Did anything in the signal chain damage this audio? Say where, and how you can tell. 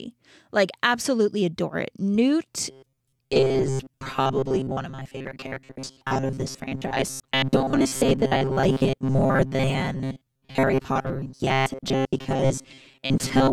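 Yes. Robotic sound from repeated short buffers runs from 2.71 s to the end at 13.53 s, and the stage is most likely the driver or buffer. The speech collapses into a stiff, metallic buzz pitched at 133 Hz that still tracks the rough shape of the words. That fixed pitch means a slice about 7.5 ms long is being replayed whenever fresh audio fails to arrive, so roughly 70% of the signal is repeats rather than real speech.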